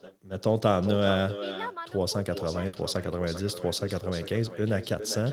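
From the start, an uncancelled echo returns each phrase roughly 0.4 s later, about 11 dB down and thin: far-end loudspeaker pickup with no echo canceller. At 2.67 to 2.75 s, a packet-loss burst: the receiver stretches the last sound for about 60 ms, fading it, then resumes with about 60 ms of speech missing.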